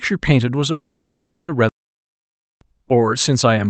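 From 0.71 to 1.50 s comes a call audio freeze: the last sound smears into a fading buzz, then about 0.37 s of silence, likely from packets held up so the jitter buffer ran empty. Speech resumes where it stopped. At 1.69 s a playback stall cuts the sound off abruptly, with no lingering buzz, for about 0.92 s until 2.61 s. This is likely the player running out of data.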